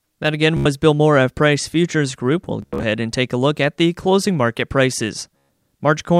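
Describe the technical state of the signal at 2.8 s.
At 2.8 s the signal is in the closing part of a Bluetooth stutter running from 2.62 to 2.83 s, just before "and take a look". Packets arrived late or not at all, and the receiver kept replaying its last short buffer, so a brief slice repeats as a rapid buzzing stutter. About 145 ms of audio is lost across the 0.2 s span, the longest continuous gap about 73 ms, and speech resumes further on as though it had kept playing.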